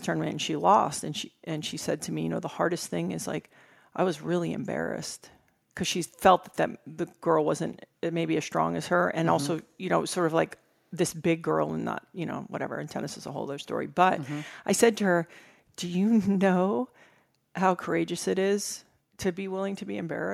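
No technical faults can be heard anywhere in the clip.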